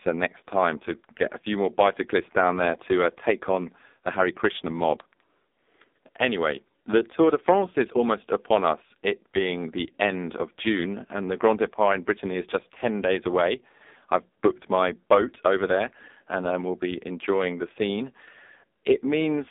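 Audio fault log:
Throughout: AMR narrowband mobile codec. Nothing above about 3.8 kHz survives, and the band is cut to roughly 250 Hz to 3.7 kHz, like a phone line. The codec rebuilds speech from a vocal-tract model fed with a few pulses per short block. It has very few bits here, which points to one of the lowest AMR-NB modes, near 6 kbps. So the voice sounds heavily buzzy and synthetic, with thin consonants.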